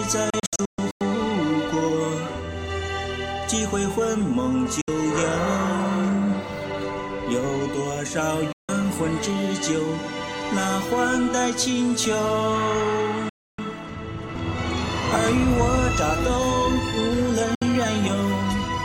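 Digital broadcast dropouts mute the sound at 0.30–1.01 s, 4.81–4.88 s, 8.52–8.69 s, 13.29–13.59 s and 17.55–17.62 s. Failed frames trigger a 3 ms fade to silence. The first event is scattered holes, the longest 128 ms. Lost audio never returns.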